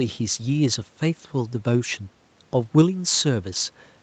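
Nothing's wrong with this bit of speech: it just has the 8 kHz top end you'd expect from a call's microphone processing and codec, plus a little room noise sitting about 38 dB below it.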